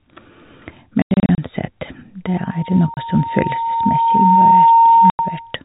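Telephone speech, band-limited to 4 kHz. It suffers packet loss filled with silence: hard-edged holes at 1.02–1.38 s (about 210 ms missing, longest gap 90 ms), 2.94 s (30 ms) and 5.1–5.19 s. The gap lengths suggest 30 ms packets. From 2.26 s to 5.57 s a loudspeaker feedback squeal at 921 Hz swells over roughly two seconds. It ends about 10 dB above the speech, as the microphone re-amplifies its own loudspeaker.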